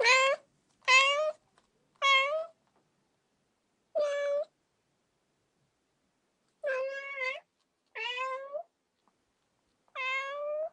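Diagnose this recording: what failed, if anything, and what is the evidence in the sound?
What failed is a channel delay (comb filtering), probably at the driver or buffer stage. From 6.81 s to 9.01 s the sound turns hollow and phasey, like it's being played down a tube, then snaps back. One channel is running late by roughly 10 ms, likely a short buffer slip, and when the two get summed to mono the shared content cancels at evenly spaced frequencies. That gives fixed notches starting somewhere around 40 Hz and repeating up the spectrum.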